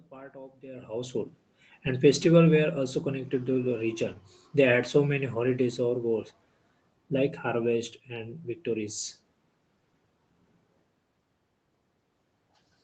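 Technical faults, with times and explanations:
No technical faults detected.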